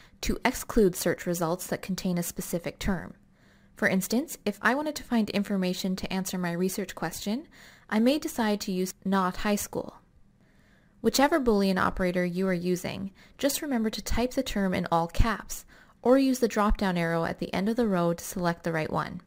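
Throughout the clip, crude rate conversion, likely a 44.1 to 48 kHz change done by repeating nearest samples, leaves an inharmonic fizz about 25 dB below the sound, tracking loud, bright passages.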